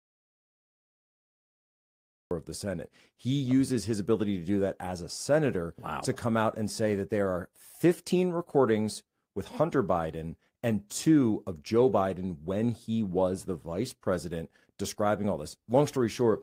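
From the very start to 2.31 s there is silence with no room tone, an audio dropout to silence, likely from the input being lost while recording continued.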